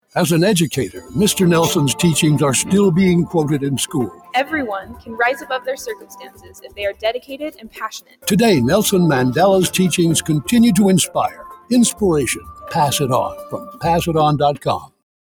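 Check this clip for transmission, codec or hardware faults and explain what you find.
A noise suppressor designed for speech is running on this sound from start to finish, and it audibly removes material in seven places.

The noise suppressor applied to music or sounds works throughout. It judges sustained tones, ambience and reverb to be noise and turns them down, so the loss swings by something like 10 dB as the content changes. Onsets pass while held material sinks, which makes the sound pump and thin. A compressor or automatic gain control would move the whole signal together. Here the attenuation follows how steady the content is, not how loud.

Sound cut by the noise suppressor occurs at 0.89–1.15 s (down by about 12 dB), 3.87–4.52 s (about 16 dB), 4.81–8.27 s (about 20 dB, the longest stretch, roughly three seconds), 11.07–11.71 s (about 17 dB), 12.35–12.73 s (about 10 dB), 13.36–13.84 s (about 13 dB) and 14.55–15.02 s (about 20 dB). 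In each, sustained or decaying sound sinks and tails are cut short. A dropout would silence everything abruptly. Here the sound fades under the suppressor while sharp transients still come through.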